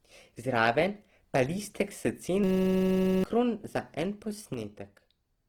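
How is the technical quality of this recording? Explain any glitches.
The recording has three audible faults: grainy compression damage throughout, a buzzing freeze in the middle, and a level drop at the end.

Throughout, the speech sounds rough and grainy, with content reaching about 20.3 kHz. This is likely Opus compression in its music (CELT) mode, with noise-filled bands, which fits a low bitrate around 16 kbps.

From 2.44 to 3.24 s, a steady buzz at 188 Hz replaces the speech. This is a system hang loop: the hardware kept replaying one 5.33 ms stretch, which fits a 256-sample buffer, so about 0.7 s of audio is lost.

From 4.54 s to the end, the sound falls by about 6 dB. This is likely one channel dropping out, which halves the shared material in the mono sum.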